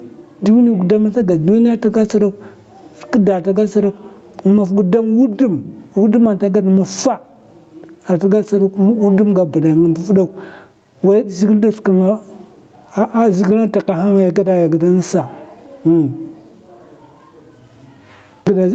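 Gain pumping runs through the whole clip. The gain swings by around 15 dB, which leaves the dynamics squashed. The likely cause is input gain set far too high, with a fast limiter clamping each peak. Above this, the audio stops at 8 kHz, which fits an Opus call path at roughly 48 kbps.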